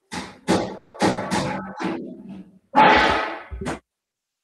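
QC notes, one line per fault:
0.77–0.95 s, call audio freeze: the sound stalls into a fading buzz or hiss for about 170 ms, then picks up where it left off with nothing lost. Likely packets held up in transit draining the jitter buffer, so the rest runs 170 ms late.
1.10–1.18 s, burst of packet loss: roughly 70 ms gets papered over with a decaying continuation of the last sound, and when things resume that stretch is simply gone. A short run of packets went missing, and concealment filled the hole through the Opus decoder.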